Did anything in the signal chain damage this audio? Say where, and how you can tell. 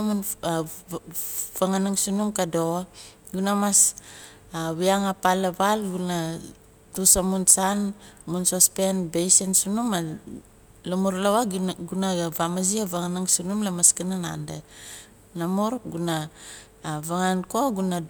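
No, nothing along the signal chain has left an audible mark on this speech recording, and every stage from capture to playback appears to have passed it through intact.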